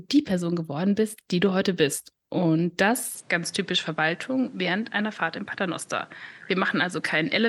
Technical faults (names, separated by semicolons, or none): input switched to a poorer device